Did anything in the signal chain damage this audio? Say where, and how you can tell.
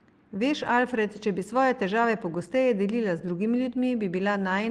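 No, nothing in the signal chain audibly damaged this speech recording, and its level, continuity and frequency content all hold steady throughout.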